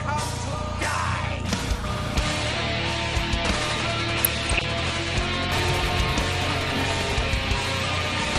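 MP2 compression runs throughout the clip. The whole sound is dull and closed-in, with a gurgling, granular texture where the upper range seems to switch in and out. This is likely low-rate MPEG Layer II coding, which fits a bitrate around 80 kbps. At that rate the coder cannot fund all 32 of its sub-bands. It drops the highest ones entirely and quantises the rest coarsely, and that causes the flickering top end and the grainy residue.

DAB burbling appears from 4.16 to 4.64 s as a half-second patch of burbling over the audio. Bit errors from weak reception, a small fraction of bits, got past the error correction and into the MP2 frames. Corrupted samples put short blips of noise into single sub-bands, and corrupted scale factors make sub-bands leap in level for up to a frame, so narrow bands pop up and vanish in quick succession instead of producing a broadband click.

Chunks out of order causes a brief jumbled moment between 5.58 and 5.70 s. 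The sound points to a 60 ms chunk of audio arriving one chunk late and playing after the piece that should have followed it. No audio is missing, but the order is swapped. That creates three hard joins close together, where the waveform jumps discontinuously, and it briefly scrambles the flow of the sound.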